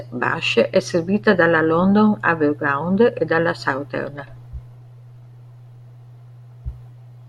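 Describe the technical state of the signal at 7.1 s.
At 7.1 s the speech signal is intact, with no audible technical fault at that moment.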